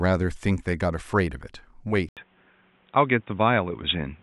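At 2.09 s an 80 ms gap precedes duller speech, likely from an input switched to a poorer device. The spectrogram then shows nothing above 3.8 kHz.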